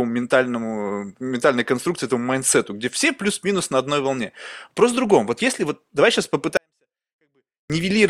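A speech clip where, after "если вот давай сейчас", a 24-bit alignment error from 6.57 to 7.70 s drops the level by about 48 dB: 24-bit samples sitting in the low bytes get read as 32-bit values. The waveform collapses to a near-flat line, the spectrogram fades almost to black, and the sound stays clean but nearly inaudible.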